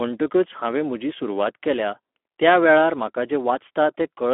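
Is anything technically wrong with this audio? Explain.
Yes. Throughout the speech, the sound is hoarse and grainy, confined to roughly 250 Hz to 3.4 kHz with nothing above 3.7 kHz. This is Speex codec damage. A narrowband CELP setting, likely around 11 kbps, has too few bits to model the excitation faithfully.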